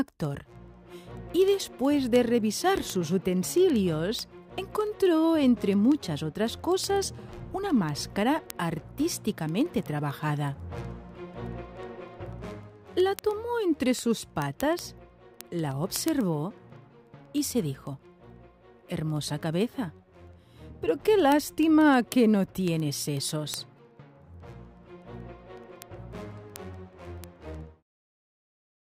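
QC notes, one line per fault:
0.12–28.90 s, word clock ticks: a sharp tick keeps coming at a steady rate, roughly every 70 ms, so about fourteen a second and several hundred over the clip, some louder than others. The receiving end is running on its own clock instead of locking to the digital input, with the two drifting apart by something like 300 ppm. Every time they slip past each other a single sample gets dropped or doubled, and that glitch is the tick.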